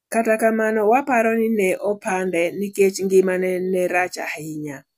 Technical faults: none

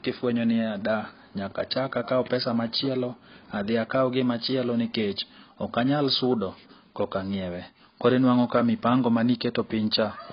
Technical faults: AAC compression

